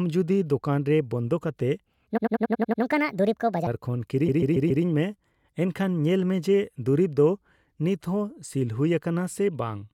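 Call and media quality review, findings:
Section at the wrong speed, 1.85 to 3.67 s. Speech runs 1.46 times fast, about seven semitones high. Likely a playback or resampling clock mismatch.

Repeated frames, 2.16 to 2.81 s and 4.27 to 4.83 s. Stutter. A 92.9 ms and then a 139.3 ms block replay, adding 650 ms and 557 ms. Writer or transport fault.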